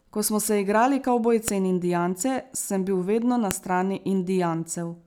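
At 1.48 s there's a sharp, loud snap in the speech, and another at 3.51 s, each over almost instantly. That's a file header played as audio: the clip was stitched together from separate WAV pieces without stripping their headers, so those few dozen bytes of metadata get read as sample values. They hit as a hard click at each join, regardless of what the speech is doing at that moment.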